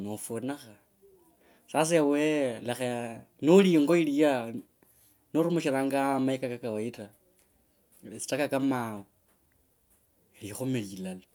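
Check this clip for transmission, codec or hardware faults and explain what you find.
Nothing in the speech points to a transmission, codec or hardware fault.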